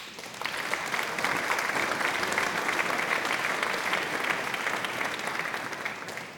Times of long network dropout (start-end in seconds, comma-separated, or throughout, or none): none